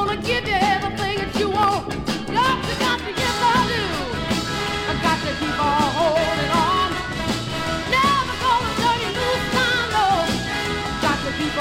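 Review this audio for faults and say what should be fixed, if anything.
Nothing here needs fixing.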